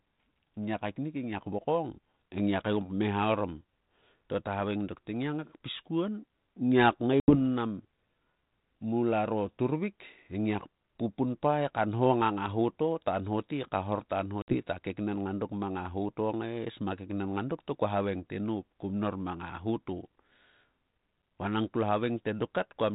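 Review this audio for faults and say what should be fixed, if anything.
Packet loss on an ADPCM call breaks the speech twice: at 7.2 to 7.36 s, with 80 ms lost, and at 14.42 to 14.56 s, with 60 ms lost. Each is a few packets replaced by silence. Afterwards the decoder's predictor and step size no longer match the sender's, so speech resumes with some distortion before settling. A waveform shows a flat gap with abrupt edges; a spectrogram shows a blank vertical band. Under the telephone-band G.726 coding, whose light coding damage fits 32 kbit/s, fix the network loss with jitter buffering and packet-loss concealment that resets the decoder state cleanly.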